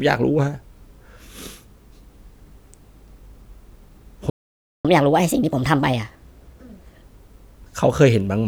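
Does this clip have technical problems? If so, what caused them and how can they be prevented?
Yes. A playback stall at 4.30 to 4.85 s cuts the speech off mid-flow for about 0.55 s of silence before it resumes, most likely because the player's buffer ran dry or its audio thread was blocked. A larger buffer and a high-priority audio thread prevent it.

Catch-up at higher speed follows from 4.85 to 7.03 s. The player resamples its backlog at 1.25 times normal speed, raising the pitch by roughly four semitones until the lost time is regained. Using time-stretching instead of plain resampling keeps the pitch steady.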